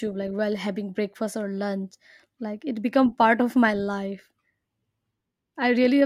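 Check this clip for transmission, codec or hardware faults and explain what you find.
No technical fault can be heard anywhere in the speech signal.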